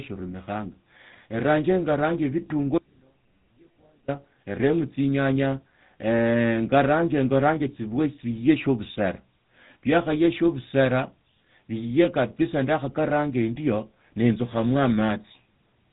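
From start to finish the speech carries the sound of the GSM full-rate codec, and the damage is plainly audible. The coder models the vocal tract as a filter, then excites it with a sparse, regularly spaced pulse train rather than the true residual. That leaves a buzzy, gravelly roughness on every voiced stretch. Nothing reaches above about 3.8 kHz, so sibilants are dull and the voice sounds boxed in. The character fits a 13 kbps rate.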